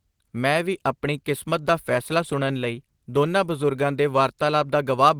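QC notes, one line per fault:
No faults heard.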